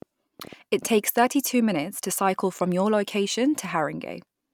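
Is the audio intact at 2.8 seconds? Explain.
Yes, the audio is intact at 2.8 seconds, with no audible fault at that moment.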